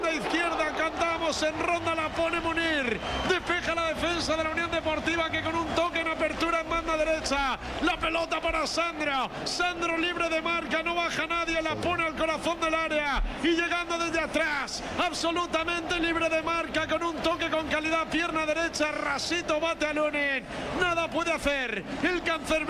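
No dropouts, clipping, glitches or other technical faults can be heard anywhere in the recording.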